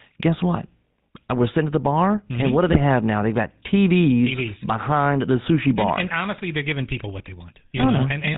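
A buzzy, gravelly roughness sits on the speech from start to finish, with nothing above 4 kHz, so the voice sounds narrow and grainy. This is the GSM full-rate codec, and the damage is plainly audible. The coder models the vocal tract and drives it with a regularly spaced pulse train that keeps only every third excitation sample, which fits the 13 kbps full-rate scheme. That coarse excitation is what grinds against the natural voice.

From 2.67 to 2.79 s, and again from 7.75 to 7.87 s, the speech briefly breaks into a squawking, gargling burst. These are GSM bit errors. Each burst lasts about 120 ms, which points to six consecutive 20 ms frames arriving with corrupted bits, at a rate of roughly 2%. When flipped bits land in the filter, pitch or gain parameters, the decoder rebuilds those frames with a warped spectrum and an unstable level, so the voice turns momentarily rough and distorted.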